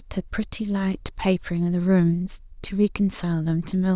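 No technical faults can be heard in this speech recording. The signal stays steady throughout, with nothing that calls for comment.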